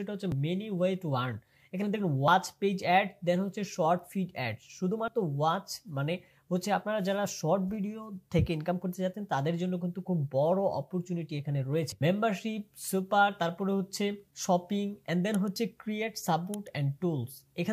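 Samples were likely overwritten before being read, a dropped buffer (overrun), so the audio jumps ahead at 0.32, 2.28, 5.08, 11.92 and 15.56 s, losing roughly 40 ms each, nearer 70 ms at 11.92 s.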